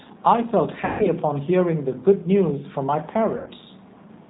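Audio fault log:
Throughout: G.729 codec, plainly audible; speech rebuilt from a vocal tract model at about 8 kbit/s sounds rough and synthetic, with nothing above 4 kHz.
0.85 to 1.08 s and 3.37 to 3.50 s: VoIP packet loss concealed by the speech codec; gaps of about 150 ms, then 90 ms, were filled by extrapolating the last pitch, giving a fading buzzy tone or coloured noise, with weakened speech as frames rebuild, which fits five and then three lost packets.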